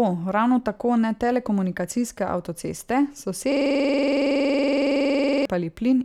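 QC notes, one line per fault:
3.52–5.45 s, system hang loop: right after "tako ne telekomunikacijske avtoceste" the speech freezes into one fragment about 46 ms long, replayed exactly some forty times. This fits a 2048-sample ring buffer cycling while the system stalled. At 21.5 repeats per second it sits between buzz and stutter, a rough rattling drone. On the waveform an identical block is tiled edge to edge. On the spectrogram a frozen spectral slice shows vertical seams every 46 ms.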